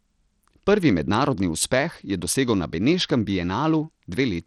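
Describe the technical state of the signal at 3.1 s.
At 3.1 s the speech carries plainly audible codec damage, and it runs through the whole clip rather than just this moment. The treble is thin and unsteady, with a gritty grain and aliasing riding on the voice. Nothing is present above 18.5 kHz. The likely cause is Bluetooth SBC compression. Its coarse sub-band coding starves the upper bands of bits. The sound points to a low bit pool, around 80 kbps.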